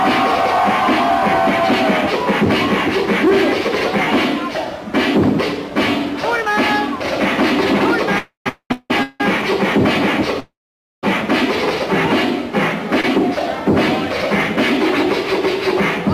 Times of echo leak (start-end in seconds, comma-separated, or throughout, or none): none